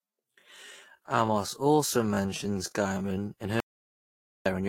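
A speech recording with swirly, hollow, smeared sound throughout. This is generation loss, likely from roughly four Vorbis re-encodes stacking their noise. From 0 to 3.28 s the speech is a time-stretched section, slowed to about 0.66x speed with unchanged pitch. It drags, likely from a stretch that repeats short slices. From 3.60 to 4.46 s there is an audio dropout to silence: about 0.86 s of flat, silent waveform and an empty spectrogram with no room tone, likely from a lost input.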